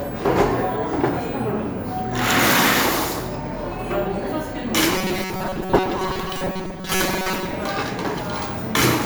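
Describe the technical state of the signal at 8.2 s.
At 8.2 s the signal is intact, with no audible fault in the sound at that moment.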